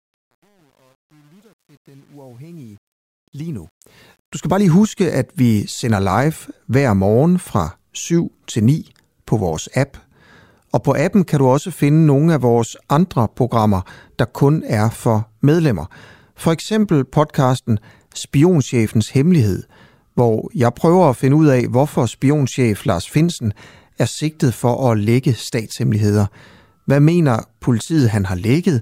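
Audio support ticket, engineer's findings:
Truncation distortion on a fade, 0.00 to 4.68 s, worst 0.00 to 3.5 s: gritty stepped waveform. Undithered digital fade or gain stage, fits a 9-bit word length.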